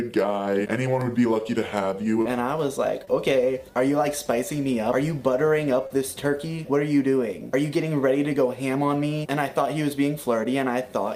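Three brief smears at 2.21 to 2.27 s, 3.05 to 3.09 s and 5.87 to 5.92 s are short concealed packet loss: 40, 20 and 40 ms of audio never arrived, and the receiver extended the preceding sound to fill each hole rather than leaving the silent gap or click of a plain dropout.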